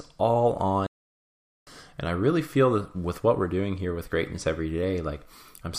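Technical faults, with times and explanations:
0.87 to 1.67 s, playback stall: the speech drops abruptly into silence in mid-flow and stays silent for about 0.8 s before the sound comes back. The gap is dead quiet, so the sound is simply interrupted rather than damaged. The likely cause is the player running short of buffered data, or its audio thread being held up, so nothing reached the output until it recovered.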